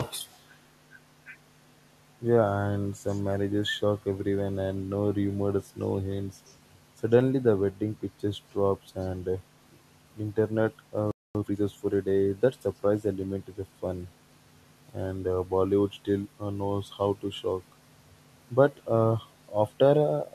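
From 0.3 to 0.45 s, then at 3.06 to 3.22 s and 6.45 to 6.56 s, a faint echo leak trails the speech by a fixed 137 ms, likely because a far-end loudspeaker's echo canceller let some pickup through. The constant delay sets it apart from diffuse room reverb. From 0.84 to 1.05 s and 1.24 to 2.18 s, speech suppressed in double talk makes the audio dip by roughly 5 dB, likely because the canceller ducked this side while both sides spoke. These are shallow dips, not complete dropouts. At 11.11 s a playback stall silences the sound for 237 ms, likely because the player's buffer ran dry, and the audio resumes mid-flow. From 11.35 to 11.57 s a time-compressed catch-up runs at 2x speed, hurried but at normal pitch, unlike a resampled speed-up.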